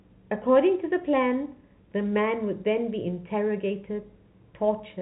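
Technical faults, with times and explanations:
No technical faults detected.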